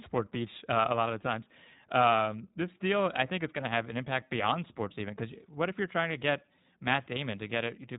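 From start to finish the speech carries plainly audible iLBC codec damage. Each short frame's excitation is coded on its own, leaving a rough, slightly synthetic edge, and nothing passes above 3.8 kHz. A spectrogram shows an empty band above that hard ceiling.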